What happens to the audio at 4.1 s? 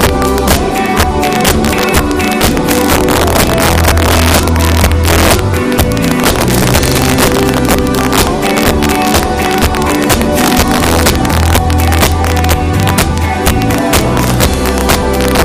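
At 4.1 s the audio is affected by integer overflow, which runs through the whole clip rather than starting there. The signal is driven about 5 dB past the integer limit, and instead of being held at full scale, each peak that crosses it wraps around to the opposite extreme. Only a small share of samples go over, so it sounds like harsh, violent cracks on the loudest moments. Clipping would flatten those peaks into a duller buzz.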